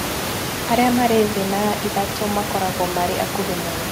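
No technical faults occur at any point in this speech recording.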